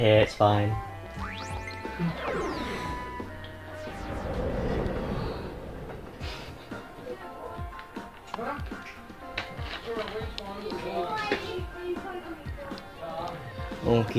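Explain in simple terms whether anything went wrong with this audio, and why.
Nothing went wrong: no audible fault anywhere in the recording, so there's nothing to explain.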